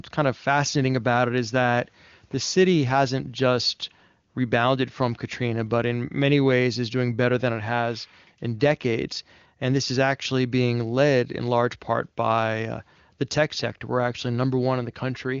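Nothing here is technically wrong: the speech comes over the AMR wideband (HD Voice) codec at 23.85 kbit/s, its highest rate, so the sound stops at about 7.4 kHz, and no fault turns up anywhere along the way.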